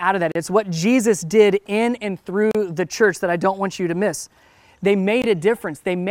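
Three brief dropouts cut into the speech, each a hole of silence with smeared edges, after which the sound resumes exactly where it stopped. The first runs from 0.32 to 0.35 s, about 36 ms, right after "of that"; the second from 2.51 to 2.55 s, about 34 ms, between "did in and" and "the church that I"; the third, about 19 ms, falls at 5.22 s. Each is a gap at a join of encoded pieces: separately encoded segments were spliced untrimmed, leaving the encoder's start-up delay and final-frame padding in place as silence.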